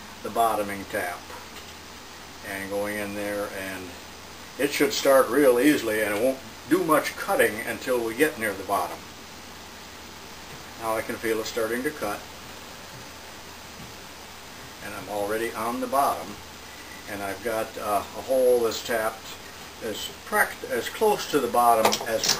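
No technical faults can be heard anywhere in this clip.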